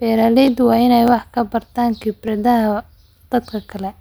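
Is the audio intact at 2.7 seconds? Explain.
No. The moment at 2.7 s falls inside a run of clock drift buffer slips lasting from 0.48 s to 3.48 s. Clicks recur every 0.6 s while the speech plays. The likely cause is two devices running on separate clocks, mismatched by several hundred parts per million. The buffer between them slowly drifts until a short block of samples, around fifteen, is dropped or repeated. Each slip is heard as a brief tick.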